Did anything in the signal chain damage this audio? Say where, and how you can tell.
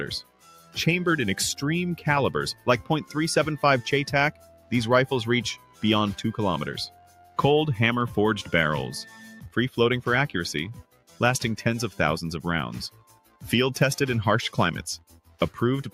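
Yes. A noise suppressor applied to music or sounds runs through the whole clip, in the call-processing stage. The level keeps swinging by about 5 dB as the suppressor mistakes sustained, steady parts of the sound for background noise and pulls them down. Onsets slip through before it reacts, then the held portions sink. The result is a pumping, fluttering, thinned texture rather than a stable level.

Sound cut by the noise suppressor appears as deeper dips at 0.23–0.76 s, 4.32–4.71 s, 5.58–5.83 s, 6.9–7.38 s, 10.78–11.2 s, 12.91–13.42 s and 14.99–15.41 s, each lasting roughly a third to half a second. Drops reach about 9 to 12 dB, deepest at 0.23 s, 10.78 s and 14.99 s. In these stretches the suppressor judged the steady or decaying material to be noise and attenuated it hard, cutting tails short.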